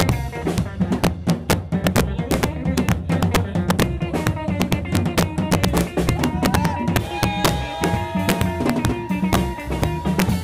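Integer overflow runs through the whole clip: the signal is driven about 5 dB past full scale, and instead of being limited, the loudest peaks wrap to the opposite extreme. Only under one percent of samples cross over, but each snaps into a harsh, violent crack far sharper than ordinary clipping.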